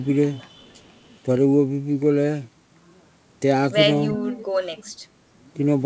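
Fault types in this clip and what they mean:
Echo leak: a faint delayed copy of the speech, about 35 dB down and trailing by 335 ms, likely from a loudspeaker echo canceller letting some through; spectrogram shows weak repeated harmonics offset 0.6–1.08 s.
Speech suppressed in double talk: the speech drops sharply, roughly 15 dB, for about a tenth of a second around 4.09–4.2 s, visible as a brief notch in waveform amplitude and thinned spectrogram energy.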